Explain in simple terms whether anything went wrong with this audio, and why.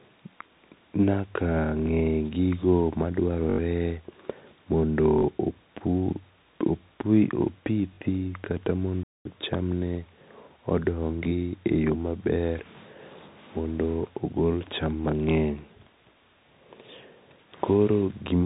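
Several things went wrong here, of three different kinds.

The whole recording carries the sound of a Bluetooth CVSD headset codec, the basic format used for calls over wireless earpieces. It keeps nothing above about 3.8 kHz, so the speech sounds muffled and phone-like. Because this format tracks the sound in tiny up-and-down steps, sharp s sounds come out scratchy and a grainy hiss sits underneath. Unlike a simple muffled filter, it adds that roughness and grain.

There are three repeated buffers, short stutters where the device ran out of fresh audio and replayed the last small chunk, each about 21 ms long. This fits a 1024-sample buffer. At 3.50 to 3.58 s the chunk plays four extra times, losing about a tenth of a second. At 5.18 to 5.23 s and 7.94 to 7.98 s it repeats twice more. Each sounds like a quick stutter, not a gap.

At 9.03 to 9.25 s there is a digital wireless dropout, just before "cham ne". 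The wireless link lost too much data, so the receiver simply muted for about 0.22 s. You hear a clean hole of near silence with no crackle on either side. That clean silence is what sets it apart from the repeated buffers, which fill the gap with recycled sound instead of quiet.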